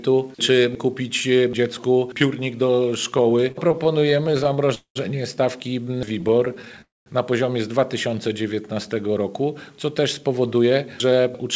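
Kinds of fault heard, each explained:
Repeated stalls (stutter): Packets kept arriving late, so the jitter buffer ran dry again and again and the receiver stretched the last sound over each wait. From 3.18 to 4.71 s there are 25 tiny gaps, none longer than 30 ms, adding 267 ms (17% of that stretch). From 5.85 to 6.80 s there are 14 gaps of at most 12 ms, adding 128 ms. Unlike a freeze, these are many brief hitches rather than one hold, and nothing is lost.
Call audio freeze: A single longer hold where the sound hangs, fades and then stops before playback resumes exactly where it left off, likely because packets were held up in transit and the jitter buffer ran empty. At 4.75 to 4.97 s it inserts 208 ms, the last 100 ms silent. At 6.82 to 7.08 s it inserts 245 ms, 200 ms of it silent. Each freeze adds that much delay, and no audio goes missing. It differs from stutter by being one continuous pause.
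Jitter buffer slow-down: To rebuild its reserve, the receiver repeated single pitch periods many times over, so the audio drags without any drop in pitch. Between 8.09 and 9.08 s, playback runs at about 93% speed and gains 77 ms, with sounds drawn out. Unlike stalls or freezes, there is no audible gap, only a continuous slowing.
Jitter buffer speed-up: The receiver held more audio than it aimed for and trimmed short pitch-period pieces to catch up, so the sound hurries along at an unchanged pitch. From 10.63 to 11.43 s it plays at about 106% speed, dropping roughly 50 ms in total. It is the mirror image of the slow-down: the sound is compressed rather than stretched, and nothing is paused or repeated.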